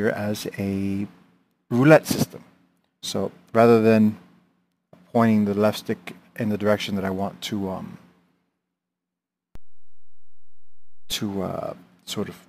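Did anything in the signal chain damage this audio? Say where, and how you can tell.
Yes. A DC step at 9.55 s shifts the waveform's zero line by about -29 dBFS, holds for roughly 1.6 s, and returns at 11.12 s. Each transition produces a low thump while the programme sound continues unaffected, which is the signature of an offset entering at the converter or analogue input stage, such as a converter recalibrating or an offset-carrying input being switched in, rather than anything upstream in the source.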